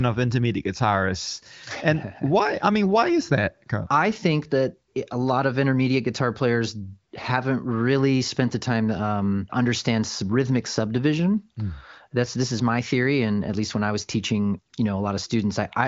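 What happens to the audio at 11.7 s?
Nothing goes wrong at 11.7 s: the speech passes through intact, carried by the AMR wideband (HD Voice) codec at 23.05 kbit/s with its usual ceiling near 7.5 kHz.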